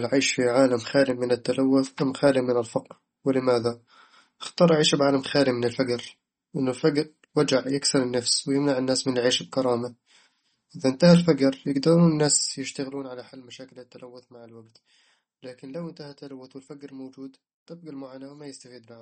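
Throughout, likely MP3 compression leaves plainly audible watery swirl; a spectrogram shows nothing above 8.4 kHz and flickering holes where starved frequency lines drop out.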